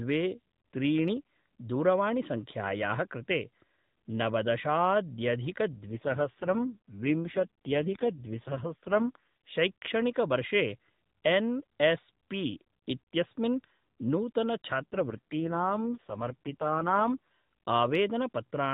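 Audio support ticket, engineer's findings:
AMR rate drop, 5.87–9.58 s: speech turns rough, buzzy, synthetic; no dropout, band unchanged. Sound points to the AMR-NB link falling from 12.2 to 4.75 kbps under weak radio, bits shifted to error protection.

AMR rate drop, 14.80–17.18 s: same roughness, same apparent 4.75 kbps mode, back to 12.2 kbps after.

Spectrogram: top edge stays at 4 kHz throughout; harmonics blur and smear in both spans; waveform continuous, no gaps.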